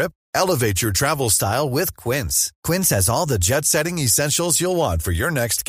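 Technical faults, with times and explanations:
1.33 to 3.54 s, drift correction step: right after "your travel" the speech jumps about 5.7% faster and roughly 95 cents sharp, nearly a semitone, then snaps back. That's likely clock-sync software nudging the playback rate in one go to rebalance its buffer.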